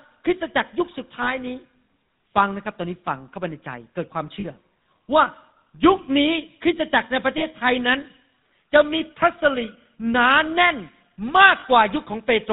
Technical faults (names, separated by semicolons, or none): GSM full-rate codec; lost GSM frames